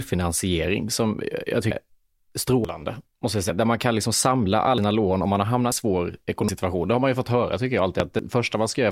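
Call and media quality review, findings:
Dropped buffer (overrun) at 1.71 s after "som jag", 2.65 s, 3.50 s after "måste jag", 4.78 s, 5.72 s after "lån om man har", 6.49 s, 8.19 s. Each is a skip with the speech jumping forward. The cause is likely capture overruns: the hardware overwrote unread buffers and the audio either side was spliced. Losses run from about a tenth of a second to a third. Unlike a pop, no gap of silence and no continuity: material is missing.

Loud pop at 8.00 s, a single sharp transient about 22 ms long, roughly 20 dB above the speech. Probable component is the input path or driver, likely a voltage step or spike added to the signal and shaped by downstream circuitry. Differs from the dropped buffers: speech continues intact beneath it with no skip in content.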